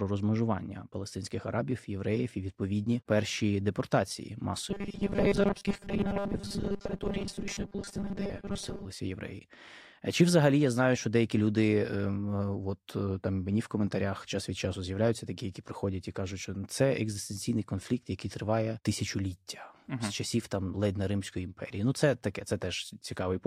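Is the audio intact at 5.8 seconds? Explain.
No. From 4.69 to 8.85 s, just after "і відповідні перші депортації", the speech turns into a rigid, metallic 200 Hz buzz that only loosely tracks the voice. This is robotic sound from repeated short buffers, likely caused by audio arriving too seldom. A roughly 5 ms slice gets replayed in place of much of the real signal, around two thirds or more.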